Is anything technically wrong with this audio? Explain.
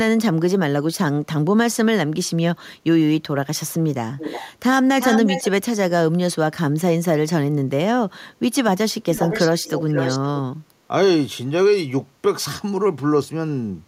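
Yes. There is echo leak in this speech clip. It occurs from 4.17 to 4.49 s, from 5.0 to 5.51 s, and from 9.02 to 10.2 s. A delayed copy of the speech is heard returning. It lags by 353 ms in the first two events and by 513 ms in the third. The copy sits about 10 dB below the speech at first, then about 5 dB below. The likely cause is a far-end loudspeaker whose echo canceller let residual pickup through.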